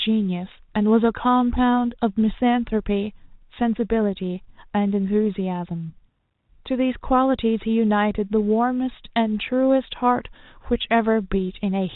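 Nothing stood out on listening to this speech, which comes through the narrow telephone band of G.711 coding as that path normally sounds.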